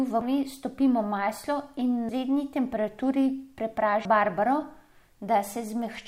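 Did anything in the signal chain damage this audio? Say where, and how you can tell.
Yes. Damaged data in the compressed stream at the codec stage corrupted a few frames, so the decoder misread them and had to resynchronise on the next valid header. In this speech clip that shows up as brief glitches at 0.21 s, 2.09 s and 4.05 s.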